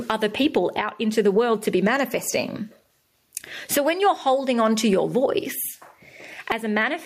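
Gain pumping runs throughout: the gain swings by roughly 15 dB with loud speech, likely from excessive gain feeding a fast limiter.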